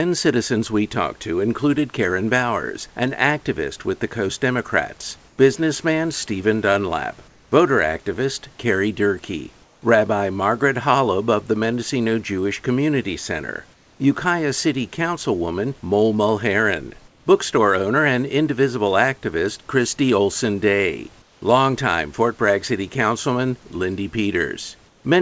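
Brief gaps at 5.28, 7.28, 9.64, 13.74, 17.08 (just before "bookstore owner and indivisible"), 21.22 and 24.88 s, each 0.1 to 0.26 s long, lose the room's real background and turn flat, featureless and about 3 dB quieter. This is comfort noise in place of the background, likely from discontinuous transmission filling pauses with synthetic noise, heard over a call path whose band stops at 8 kHz.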